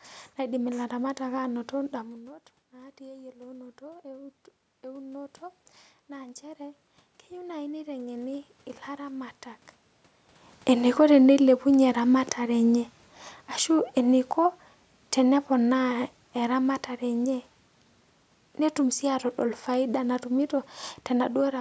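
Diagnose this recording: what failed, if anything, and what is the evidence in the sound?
Speech and room noise swell together in two gradual ramps, 1.9 to 5.39 s and 6.07 to 9.4 s, by about 6 dB then about 5 dB. This is automatic gain rising in call processing, compensating after the talker moved back and input fell about 17 dB.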